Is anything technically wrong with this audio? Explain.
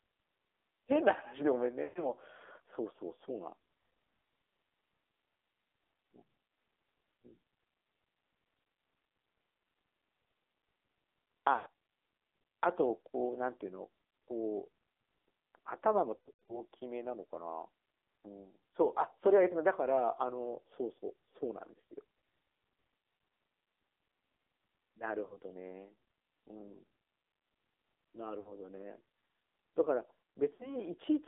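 Yes. Throughout, the speech carries AMR narrowband mobile codec damage. The codec rebuilds the voice from a vocal-tract model fed by sparse pulses, and at a low mode, consistent with 7.4 kbps, it sounds buzzy and synthetic. A spectrogram shows energy only between 300 Hz and 3.5 kHz, with blank space above.

Lost AMR speech frames occur at 1.84–2.10 s, 11.56–11.68 s, 16.16–16.63 s, 25.26–25.37 s, 28.40–28.53 s and 30.54–30.77 s. The decoder repeats the last good settings at falling gain, so the sound smears briefly, drawn out and fading over about 40 to 120 ms per event. Around 16.2 s the losses are scattered across roughly a third of a second, with the longest run 100 ms. The waveform shows sagging envelopes there, and the spectrogram shows held, blurred harmonics.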